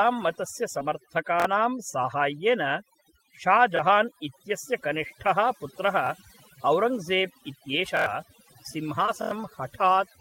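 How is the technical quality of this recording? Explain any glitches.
The speech recording is noticeably degraded by heavy noise removal throughout, two brief packet-loss repairs, and five buffer stutters.

Overdone noise removal affects the whole clip. Bands near the noise estimate are cut hard, so the background drops and breaks into twinkling, warbling specks. A spectrogram shows blank gaps dotted with isolated twinkling specks.

Short concealed packet loss occurs at 0.79–0.90 s and 9.06–9.10 s. Missing audio was replaced by extending the preceding sound, heard as a brief smear. On a spectrogram it appears as blurred, stretched harmonics.

Repeated buffer stutters occur at 1.40, 3.77, 6.07, 7.97 and 9.22 s. The last 23 ms chunk, which fits a 1024-sample buffer, replays once to four times. Each repeat has a hard join and is heard as a buzz or stutter. A waveform shows identical blocks with clicks at their edges.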